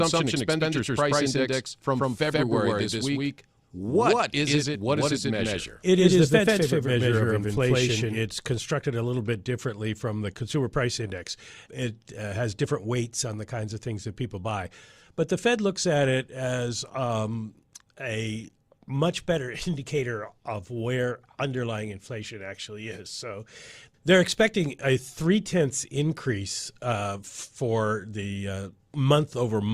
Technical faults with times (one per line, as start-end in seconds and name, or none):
0.00-8.22 doubled audio track